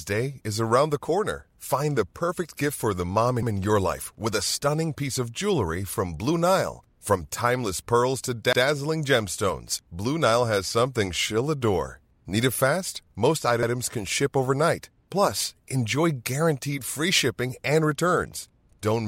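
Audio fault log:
3.43 s, 8.53 s, 13.63 s, 18.73 s: overlapping chunks. At each of these points the speech stutters briefly, with about 100 ms of sound played a second time. The audio was handled in blocks roughly 5 s long, and each new block began 100 ms before the previous one ended, so the overlap is heard twice. Because the blocks are all the same length, the repeats come at a steady 5.1 s spacing and each one lands as a click or hiccup.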